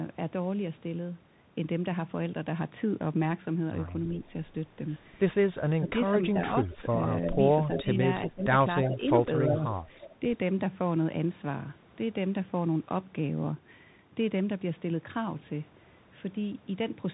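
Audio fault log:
throughout: Bluetooth CVSD headset codec. The whole clip has that narrowband headset sound, with nothing above about 3.8 kHz. CVSD sends one up-or-down bit per sample with a step size that adapts, which fits a 64 kbps CVSD link. You can hear the step falling behind on loud bright bits: sibilants go scratchy, and a grainy hiss sits under the speech.
5.78–6.98 and 7.75–9.62: speech suppressed in double talk. In these stretches the talker dips in patches instead of holding steady. The first dip goes down around 15 dB, for roughly 0.4 s in total. The second is shallower, around 10 dB, but spread over roughly 0.7 s. This is likely the echo canceller hearing both sides at once, failing to tell its own talker from loudspeaker pickup, and ducking everything.
6.72–7.82, 8.84–8.88, 9.52–10.16: echo leak. A delayed ghost copy of the speech comes back about 0.34 s late, which likely means a speakerphone whose echo canceller didn't fully clean up what its mic caught. 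The first and longest leak sits about 10 dB under the main speech, the short 8.84 blip is similar, and the last one is fainter, about 20 dB down.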